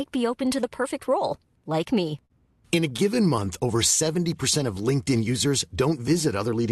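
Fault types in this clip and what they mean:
Short stall from a late packet: Right after "perfect role like me", around 2.25 to 2.32 s, a packet missed its playout deadline and the jitter buffer emptied. The receiver held the last sound for about 45 ms until the data arrived, then resumed where it left off. No speech is lost, but that sound is stretched with a brief held quality. Playout delay grows by the same 45 ms.
Repeated stalls (stutter): From 2.76 to 3.48 s the buffer ran dry eight separate times, because packets kept arriving late relative to playout. Each gap was bridged by extending the preceding sound, 76 ms in total and no more than 18 ms per gap, so roughly 11 percent of that stretch is concealment. Nothing is dropped. The speech instead drags with a fine, repeated hitching through that passage.
Jitter buffer slow-down: Between 3.77 and 4.25 s the receiver deliberately built up reserve by repeating single pitch periods and bits of pause, adding about 40 ms. 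Playback in that window runs at about 93 percent speed with pitch unchanged, so the speech sounds slightly drawn out and unhurried. This passage still carries the Opus coding of the call path, with content extending up to 12 kHz.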